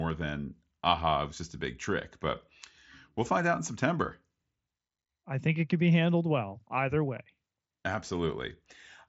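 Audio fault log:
No faults are present in this speech. The Bluetooth mSBC headset codec can be heard working normally, with nothing above about 7.7 kHz and only a light grain on louder moments, which fits its 61 kbps wideband link.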